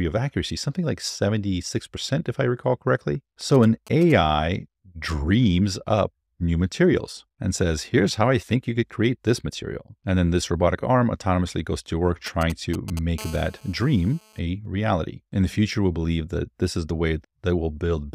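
From 3.41 to 4.12 s, and again from 12.27 to 12.99 s, there are GSM signalling bursts. A nearby 2G phone sends short groups of radio pulses at its 217 Hz frame rate, and the audio circuit rectifies them into a galloping dit-dit-dit of short buzzes. They sit roughly 20 dB below the sound in the first stretch and somewhat louder, near 15 dB below, in the second. What marks them out is the broken, clustered rhythm.

At 13.18 s, only about 0.2 s after the second burst group ends, a GSM phone buzz begins and lasts until 14.39 s. Here the phone is transmitting its bursts steadily, 217 times a second, as in a call, so the rectified pulses form an unbroken, hard, raspy 217 Hz buzz full of harmonics, about 22 dB below the sound and unrelated to it. Unlike the bursts before it, this buzz is steady rather than stuttering.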